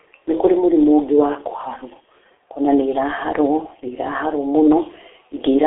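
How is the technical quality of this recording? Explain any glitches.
Quality is poor throughout, limited by G.723.1 codec coding on a telephone-band line. For the whole clip, speech sits in a narrow 300 Hz to 3.5 kHz band with nothing above 3.8 kHz. Heavy coding damage, consistent with a roughly 6 kbit/s low-rate voice model refreshed only every 30 ms, leaves it muffled and hoarse with smeared consonants. A spectrogram shows a hard ceiling and blurred, coarse formant bands.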